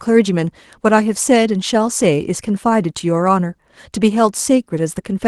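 No technical faults can be heard anywhere in the speech. It comes through a WebRTC call path whose Opus coding keeps the high frequencies up to a cut-off at 12 kHz, with the usual coding texture expected at what sounds like a bitrate of around 24 kbps.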